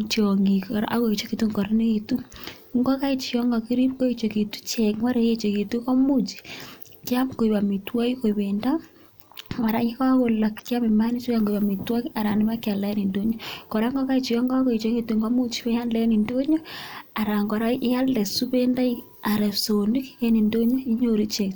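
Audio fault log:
Nothing to log here: no glitches or technical faults turn up anywhere in this speech recording.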